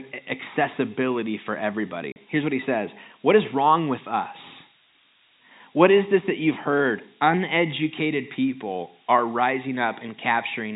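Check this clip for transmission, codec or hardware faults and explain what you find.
Two faults are audible: a steady high whistle from a switching power supply, and a brief dropout from lost packets.

The switching supply whistle runs through the whole clip. A switching power supply is cycling in an audible burst mode, or beating against another supply, and its leakage reaches the audio path. The result is a thin tone wandering between about 9.0 and 9.2 kHz as the load shifts. It sits only about 10 dB below the speech, so it stays clearly audible throughout.

The packet loss filled with silence occurs from 2.12 to 2.16 s, just after "accessibility for". The receiver got nothing for this stretch and inserted digital silence instead of concealing the gap. The 40 ms hole fits two lost 20 ms packets. The speech cuts out abruptly, with hard edges on either side of the gap.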